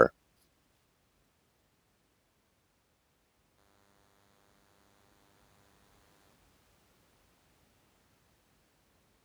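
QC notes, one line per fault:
3.58–6.33 s: DECT cordless phone buzz. A thin, steady buzz sits under the speech for about 2.75 s, pitched at 100 Hz and rich in harmonics. It comes from a DECT handset or base station close by, which transmits a short radio burst every 10 ms; the audio circuitry rectifies those bursts, turning the 100 Hz pulse train into an audible tone. The buzz stays well below the speech, roughly 30 dB down.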